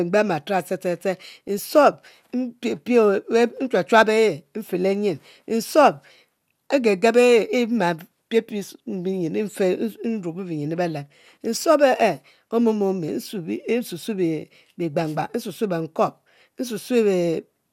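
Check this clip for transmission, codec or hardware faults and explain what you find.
One fault is present: DAB burbling in the speech from 1.48 to 1.59 s. Weak reception let a tiny share of bit errors past error correction into the MP2 data. Corrupted samples put short blips of noise in single sub-bands. The result is a brief burble lasting about a tenth of a second, which fits roughly five damaged frames.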